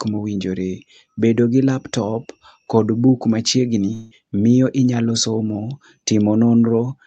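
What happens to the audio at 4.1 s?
At 4.1 s the sound turns into a smeared, fading buzz from 3.93 to 4.13 s, just before "miyo inyalo". That is likely a long network dropout: about 0.18 s never arrived, and the receiver filled the gap by extending the last sound. A spectrogram shows blurred, decaying harmonics with no true silent gap, and the waveform shows a smooth fading envelope.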